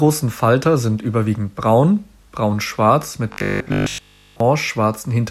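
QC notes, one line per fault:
3.32–4.40 s, robotic sound from repeated short buffers: the speech turns into a rigid, metallic 50 Hz buzz that only loosely follows the words. Likely cause is audio arriving too seldom, so a 20 ms slice was looped while most of the real signal was skipped.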